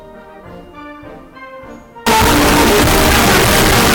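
From 2.07 s to the end, the audio turns into very loud, harsh distortion. Quiet stretches become as loud as everything else. The likely cause is signed and unsigned mixed up in the 8-bit samples. Reading one format as the other flips the top bit, so every zero crossing jumps across the full range.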